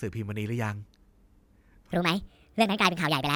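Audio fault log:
1.92–3.36 s wrong sample rate: speech plays 1.5 times fast and 7.0 semitones high, fitting 32 kHz audio played at 48 kHz; spectrogram harmonics jump upward.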